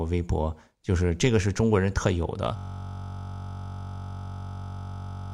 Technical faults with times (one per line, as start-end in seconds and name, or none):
2.57-5.33 system hang loop